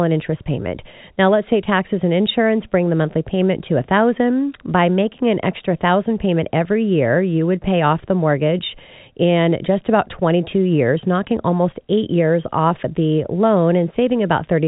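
No faults in this speech; the band stops near 3.9 kHz, as expected of G.711 A-law telephone coding at 64 kbps.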